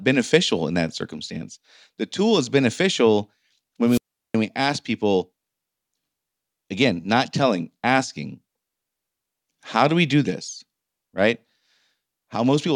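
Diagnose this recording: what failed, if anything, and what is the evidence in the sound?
A wireless microphone squelch dropout occurs from 3.87 s to 4.35 s, in the analogue radio link ahead of the mixer. The speech gives way to a short burst of hiss, then a muted hole lasting 0.37 s, as the fading FM carrier trips the receiver's squelch before the signal recovers.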